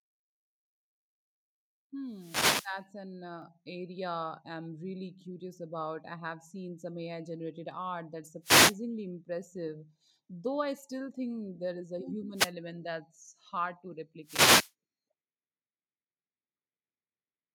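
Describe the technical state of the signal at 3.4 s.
At 3.42 s the microphone volume steps up. The level of the speech jumps by about 4 dB in a single instant, and the background rises with it by the same amount. Nothing fades in. The change is a clean step. This happens when the call software judges the microphone too quiet and raises the device's input volume in one move, so everything the microphone picks up gets louder together from that point.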